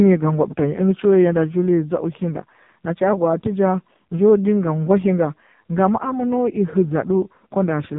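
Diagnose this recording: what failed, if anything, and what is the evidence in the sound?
The failure is at the codec stage: the speech went through the AMR narrowband mobile codec (AMR-NB), the 8 kHz speech coder of 2G and 3G networks, at a very low bitrate. Throughout the clip nothing above 4 kHz survives, so the speech is dull and boxed in. The voice is heavily buzzy and synthetic, which fits the 5.15 kbps mode, where too few excitation pulses per 5 ms subframe leave the vocal-tract model rebuilding the voice coarsely.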